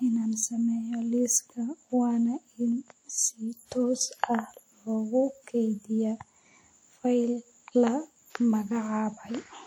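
Speech throughout carries ringing, washy smearing with hiss that breathes with the voice, likely WMA compression at around 48 kbps; unlike a bandwidth-limited codec, content still reaches 20.1 kHz.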